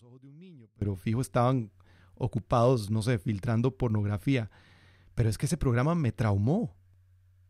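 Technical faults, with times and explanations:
0.0–0.82 s, one channel inverted: the speech drops by about 28 dB to a faint residue, then returns at full level just before "fijo estaban ocupados no". The likely cause is reversed polarity on one stereo channel, so on a mono fold-down the centred speech present in both channels cancels almost completely. What survives is only the small difference between left and right.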